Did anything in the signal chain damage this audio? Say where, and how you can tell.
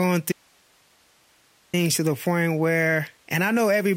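Yes. An audio dropout to a faint residue runs from 0.32 s to 1.73 s, about 1.41 s of lost speech. The speech cuts off abruptly mid-flow and returns just as suddenly, with only hiss around 40 dB below the signal in between. On the waveform the envelope collapses to a thin noise band with vertical edges. The spectrogram shows a gap filled by flat, broadband hiss. The likely cause is an intermittent break in the analogue wiring ahead of a stage that stayed live.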